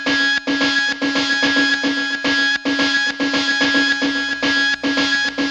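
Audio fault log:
4.05–5.50 s, mains buzz: a steady, raspy buzz comes in at 4.05 s and holds to the end of the clip, sitting well below the main sound, at about 30 dB under it. The rasp comes from sharp switching spikes on a 60 Hz supply, arriving twice per cycle, picked up through a dimmer, rectifier or poorly shielded line. Those spikes carry a dense ladder of 60 Hz harmonics reaching up to several kHz, which gives the hum its edge.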